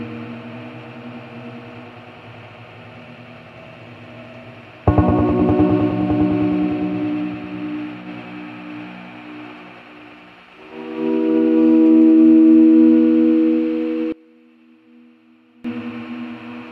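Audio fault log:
14.12–15.64 s, one channel inverted: for about 1.5 s the level drops by about 24 dB and what remains is a faint copy, with the centred, common content nearly gone and only the difference between the channels left. This is likely one stereo channel flipped in polarity and cancelling against the other when summed to mono. A plain gain drop or dropout would lower or silence everything evenly, not strip out just the centre.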